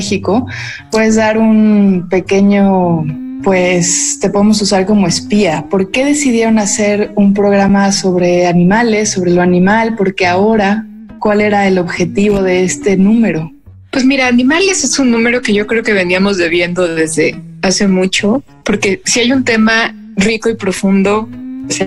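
At 7.69 s the sound briefly stops, flattening out for about 8 ms with hardly any click as it drops away, then picks up again with only a soft edge rather than a sharp tick. This is an underrun with held sample: the output buffer ran dry, and the converter kept holding its last value, leaving a flat stretch rather than silence. Since playback resumed where it paused, with essentially nothing skipped, the restart stays gentle.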